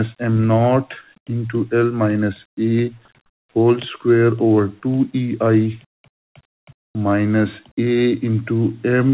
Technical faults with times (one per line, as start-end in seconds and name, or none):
0.00-9.14 noise suppressor applied to music or sounds
1.05-1.29 sound cut by the noise suppressor
2.91-3.24 sound cut by the noise suppressor
5.79-6.10 sound cut by the noise suppressor
6.77-6.95 comfort noise in place of the background
6.93-6.95 onset clipped by the voice detector